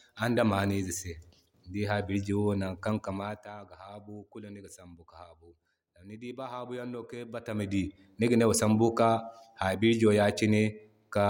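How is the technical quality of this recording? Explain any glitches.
The speech has two bursts of zipper noise where the level is moved. At 3.09–3.54 s the level drops roughly 15 dB, and at 7.25–7.85 s it climbs back. Both times it moves in 1 dB jumps about fifty times a second, with no smoothing, so each step clicks into a buzzy ticking. The waveform envelope shows a staircase, and the spectrogram shows evenly spaced faint vertical lines.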